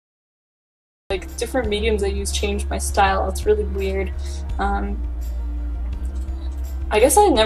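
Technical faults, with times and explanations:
0.00 to 1.10 s, cut-off start: the clip sits silent for about 1.1 s, then the sound appears abruptly at 1.10 s already in progress, with no natural attack or fade-in, because capture began late and missed its opening.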